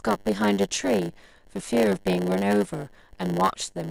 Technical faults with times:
0.00-3.90 block size mismatch (padded)

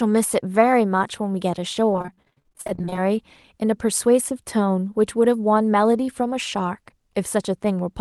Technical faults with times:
1.91-2.98 repeated packet loss (robotic sound)

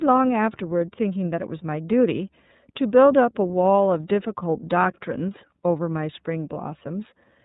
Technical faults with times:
0.00-7.44 iLBC codec

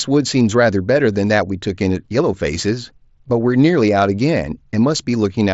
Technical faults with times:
3.28 concealed Bluetooth headset packet loss

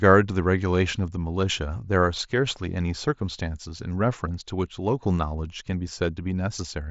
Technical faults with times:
none

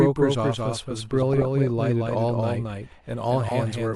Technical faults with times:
0.00-3.95 doubled audio track
1.22-1.42 DAB burbling
3.46-3.51 DAB burbling

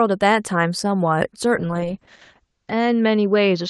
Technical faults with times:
1.57-3.70 call bitrate drop

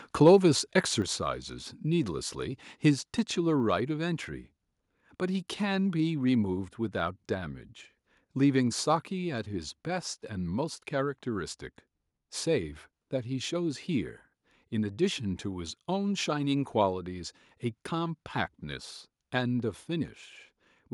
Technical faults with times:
1.02 microphone volume stepped down

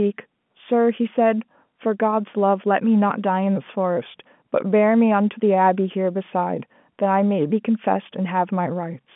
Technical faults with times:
none

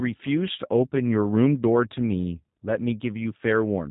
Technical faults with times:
0.00-3.91 G.729 codec

